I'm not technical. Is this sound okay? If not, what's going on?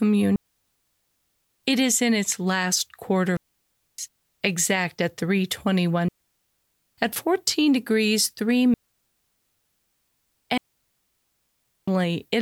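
No, it isn't. The speech passes through a digital wireless link, and that link keeps losing too much of its data. Each time that happens, the receiver shuts the sound off. This is a digital wireless dropout, and you hear it as a clean gap of near silence with no crackle or hiss at either edge. It happens five times, at 0.36 to 1.34 s, 3.37 to 3.98 s, 6.08 to 6.84 s, 8.74 to 10.04 s and 10.58 to 11.88 s. The gaps last between about 0.6 and 1.3 seconds.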